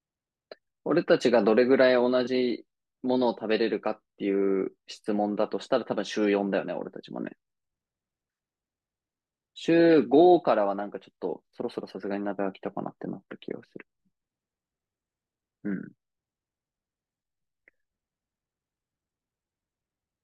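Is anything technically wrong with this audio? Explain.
No, nothing technically wrong can be heard in this speech recording. No part of it points to a problem in how the sound was captured, processed or reproduced.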